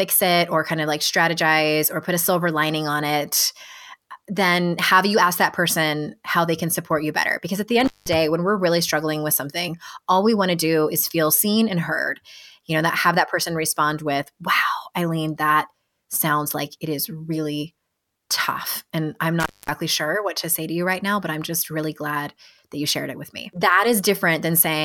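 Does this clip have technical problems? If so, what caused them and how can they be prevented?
Yes. Intermittent contact cuts the speech twice, at 7.80–8.14 s, after "at the" and before "when we're really struggling", and at 19.40–19.74 s, just before "sure what to say". A loose plug or cable opened the line for about 190 ms and 230 ms, so the signal dropped out with crackle at each edge. Seating connectors firmly and replacing worn cables prevents this.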